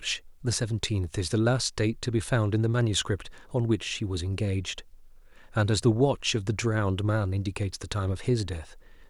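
No technical faults are audible in this recording.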